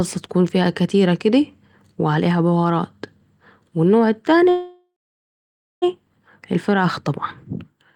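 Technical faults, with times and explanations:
4.49 to 5.84 s, call audio freeze: the last sound smears into a fading buzz, then 0.91 s of silence. The speech picks up exactly where it stopped. Nothing is lost, but it now runs 1.3 s late. Delayed packets likely emptied the jitter buffer.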